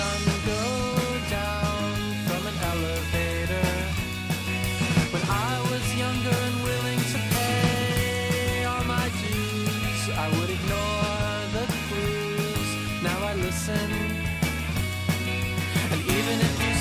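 No technical fault can be heard anywhere in the audio. Nothing in it calls for a time or a measurement.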